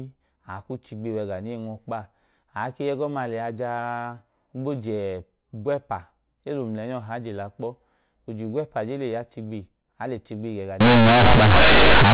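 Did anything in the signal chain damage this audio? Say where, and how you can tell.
Yes. Companded audio read as linear appears from 10.81 s to 12.14 s, a sample-format conversion fault: mu-law bytes were taken as linear 8-bit samples without expansion. Every sign change swings across half the range, so quiet passages become as large as loud ones, giving harsh buzzing distortion and loud noise in pauses.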